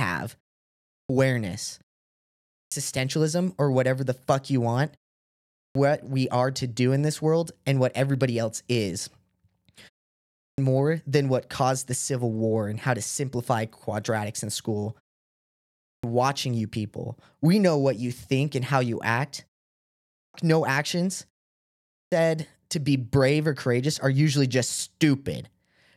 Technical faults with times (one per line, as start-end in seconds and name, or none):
0.64-1.09 clipped start after a pause
2.23-2.72 clipped start after a pause
5.31-5.75 clipped start after a pause
10.16-10.58 clipped start after a pause
15.55-16.03 clipped start after a pause
19.87-20.34 clipped start after a pause
21.63-22.12 clipped start after a pause